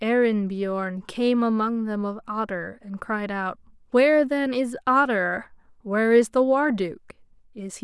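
No technical faults are audible.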